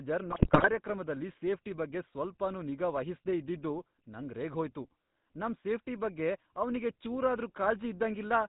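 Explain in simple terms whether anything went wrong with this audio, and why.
Throughout, the speech has the buzzy, gravelly roughness of the GSM full-rate codec. This early mobile-phone coder rebuilds the voice from a simple model of the throat driven by regular pulses, discards everything above 4 kHz, and plainly audibly coarsens the sound.

From 0.30 to 0.68 s, GSM bit errors break the sound into squawks, pops and gargling. Corrupted bits on a poor radio link scrambled the decoder's tone, pitch and loudness settings, so each damaged short segment came out distorted or suddenly loud.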